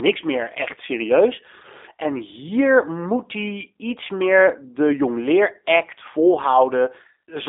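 Speech with a thin, slightly rough and buzzy quality that runs through the whole clip, with everything above about 3.7 kHz and below about 300 Hz missing. The roughness fits the G.729 codec, which fits an 8 kbit/s VoIP line: the coder rebuilds the voice from a vocal tract filter, a pitch predictor and a sparse set of pulses per short frame. That leaves a plainly audible synthetic edge on every phrase and a narrow telephone-band response.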